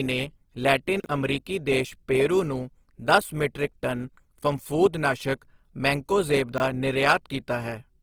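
All the way through, the speech has a grainy, rough texture, likely Opus compression in its music mode at a low rate, around 16 kbps by the sound of it.

At 1.0 to 1.06 s and again at 6.52 to 6.6 s, there's a brief garbled jumble: chunks out of order, where a 20 ms slice plays two chunks late the first time and three chunks late the second, leaving hard joins.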